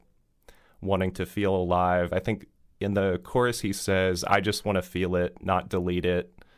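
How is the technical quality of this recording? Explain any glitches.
The technical quality holds up, with no glitches to explain.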